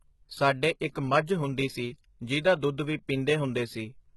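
Throughout the clip, the treble appears to be synthesised rather than coded, most likely by HE-AAC compression at a bitrate around 16 kbps. Copied lower bands stand in for the real high frequencies, so sibilants sound gritty and lispy, and nothing is present above 11.8 kHz.

At 0.80 s, the codec spreads its quantisation noise across a whole block ahead of a sharp onset, causing pre-echo. A brief hiss of about 12 ms leaks in before the attack, and the attack itself sounds softened and smeared.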